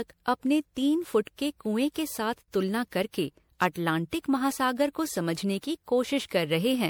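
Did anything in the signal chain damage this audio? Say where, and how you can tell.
Yes. At the codec stage, the speech has the hallmarks of generation loss, most likely from being decoded and re-encoded as MP3 at 96 kbit/s about seven times. Each pass requantises on a shifted frame grid, so noise and spectral gaps pile up. Throughout the clip, the speech sounds swirly, smeared and hollow, worse than a single 96 kbit/s encode would be, and consonant onsets lose their sharpness.

Separately, a digital gain stage applied a step change with no ramp, a sudden gain jump. From 2.38 to 2.48 s, the level drops by about 12 dB from one sample to the next and then returns. The speech and the background noise fall and recover together, which shows that the whole signal was scaled in the digital path rather than the talker getting quieter. This fits a setting or bit shift applied abruptly for about 0.1 s.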